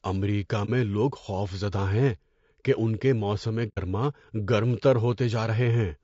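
Throughout the speech the sound is rough and grainy, with noise filling the gaps between harmonics, most likely from low-delay AAC compression (AAC-ELD) at a low bitrate, around 32 kbps. At 0.65 to 0.70 s a brief 30 ms dip fades out and back in, which fits a single AAC frame lost and muted. A longer 90 ms gap follows at 3.68 to 3.79 s, right after "کہ ان کے موسم", consistent with about three consecutive frames lost and zeroed.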